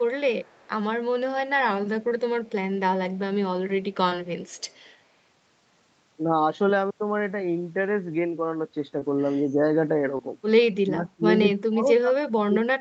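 At 0.38 to 0.69 s, an echo leak likely lets the loudspeaker sound at the far end slip past the echo canceller. It comes back as a faint copy, about 35 dB down and trailing by 182 ms. Short concealed packet loss follows at 2.09 s and 4.09 s: roughly 20 ms of audio missed the decoder each time, and the receiver extended the preceding sound to fill the gap, leaving a brief smear or wobble. The same faint 182 ms echo returns from 4.47 to 4.95 s. Two more concealed losses of the same kind land at 8.99 s and 10.17 s. From 10.79 to 11.25 s, and again from 11.54 s to the end, speech suppressed in double talk appears, likely because the echo canceller mistook overlapping talk for echo. The sound dips deeply, by roughly 30 to 35 dB.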